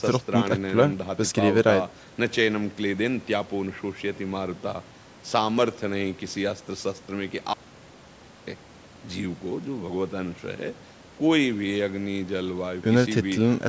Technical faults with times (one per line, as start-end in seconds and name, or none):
7.54-8.47 audio dropout to silence